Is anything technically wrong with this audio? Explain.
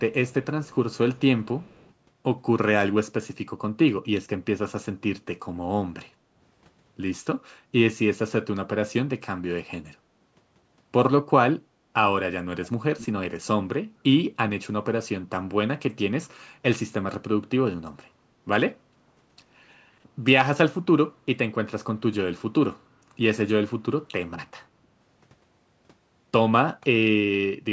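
Yes, two faults from a hands-free call turn up in this speech.

An echo leak appears in four short scraps in the opening two seconds: 0.29 to 0.45 s, 0.65 to 0.75 s, 1.14 to 1.2 s, and 1.61 to 1.94 s. Each is a faint repeat of the speech trailing it by 176 ms, very quiet relative to the direct sound. The likely cause is a far-end loudspeaker whose echo canceller let part of its own playback through. The fixed delay separates it from room reverberation: reverb smears continuously from the source, while this is a discrete copy arriving late.

Background gated by the echo canceller occurs at 18.95 to 19.12 s. The room sound briefly dips by about 12 dB for roughly a seventh of a second, then returns. The canceller pulled the microphone down while the loudspeaker played. Unlike a dropout or packet loss, the signal isn't cut or garbled; only the ambient bed sags and recovers. The call's band limit, with nothing above 8 kHz, is the call microphone processing's normal filtering.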